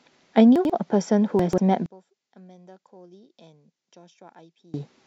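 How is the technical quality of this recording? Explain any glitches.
Not great: there are two short jumbled glitches early on, and then most of the rest of the clip drops away badly.

Chunks out of order, at 0.56 to 0.70 s and again at 1.39 to 1.58 s. The audio moves in blocks of about 46 ms, and in each spot one block turned up late, two blocks behind in the first case and three in the second, so it plays after material that should follow it. Nothing is missing, but the speech briefly scrambles at the hard joins.

From 1.86 to 4.74 s the speech falls by about 29 dB and goes faint. That's most likely one channel inverted: one side of the stereo pair has flipped polarity, so when the two are summed to mono, the centred speech cancels against itself. What's left is only the small difference between the channels, which is why it sounds so weak until it recovers near the end.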